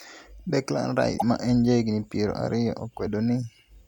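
Speech, with one short fault. From 1.16 to 1.23 s, just before "ma en jahigni piero", the audio breaks up for about 70 ms and then carries on. The likely cause is a broken MP3 bit reservoir. MP3 frames can store part of their data in earlier frames. If frames are lost, the next one reaches back and reads the wrong bytes. The damaged span lasts under three frames, which fits frames of about 26 ms.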